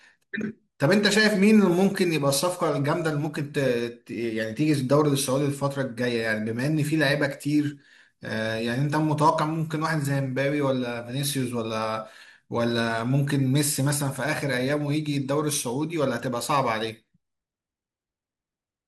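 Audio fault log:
throughout: MP2 compression, dull and gurgling as upper sub-bands flicker off and the rest turn granular, unlike a steady low-pass; likely coded near 80 kbps.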